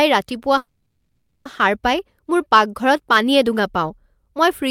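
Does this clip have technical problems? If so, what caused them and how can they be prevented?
Yes, a call audio freeze from 0.57 to 1.47 s: the receiver stretched the last sound into a fading fill for about 880 ms, likely because packets stalled and the jitter buffer emptied; the speech then resumed intact, delayed by 880 ms. A steadier network path or a deeper adaptive jitter buffer would prevent it.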